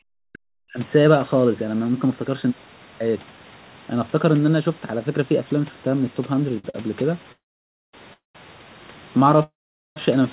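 Speech suppressed in double talk runs from 0.0 to 0.79 s. The speech is pushed down hard, by about 40 dB at its deepest, and comes through in broken, thinned pieces for roughly 0.7 s. The likely cause is an echo canceller that took the overlap between the near talker and the far-end echo as echo alone, and turned everything down until the overlap ended.

Two short stalls from a late packet follow, at 6.59 to 6.65 s and 6.70 to 6.75 s. A packet was late each time, the jitter buffer briefly ran dry, and the receiver held the last sound for 50 ms and then 41 ms before going on from the same point. Nothing is lost. The speech just catches for an instant twice in quick succession, with a faint buzzy hold.

Call audio freezes come at 7.32 to 7.94 s, 8.13 to 8.36 s and 9.43 to 9.97 s, lasting 613 ms, 213 ms and 527 ms. Each likely comes from packets being held up long enough to empty the jitter buffer. 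The receiver briefly extends the last sound into a fading buzz, then drops into silence for about 550 ms, 150 ms and 450 ms. The speech then resumes where it stopped, so gaps are inserted and nothing is skipped. Throughout, the band-limited sound with nothing above 4 kHz fits a narrowband G.711 call path.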